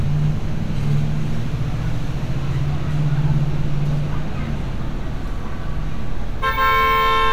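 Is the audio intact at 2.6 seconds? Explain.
Yes, the audio is intact at 2.6 seconds, with no dropout, click, distortion or other fault at that moment.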